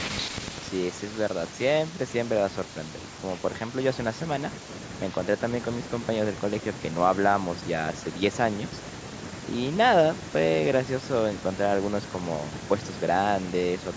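Nothing's wrong with this speech recording; it went through a call's microphone processing, so the very lowest bass is trimmed and nothing sits above 8 kHz, which is exactly what you'd expect from that path.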